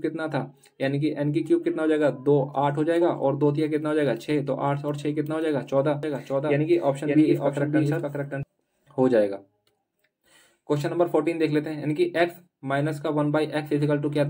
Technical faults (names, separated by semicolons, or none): doubled audio track